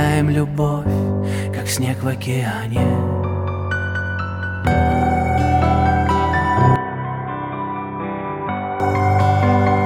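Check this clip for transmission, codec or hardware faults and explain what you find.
One fault, from 6.76 to 8.8 s: the input likely switched to a poorer device that passes nothing above 3.8 kHz. The sound turns dull and boxy, drops about 10 dB, and picks up faint new background noise, with no gap at the switch.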